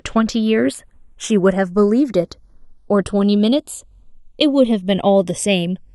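Throughout the speech, the two channels are channels drifting apart: each was captured on its own clock, and those clocks disagree by roughly 70 parts per million. The delay between them slides, reaching under half a millisecond, so summed to mono, sweeping comb notches give a slow flanging.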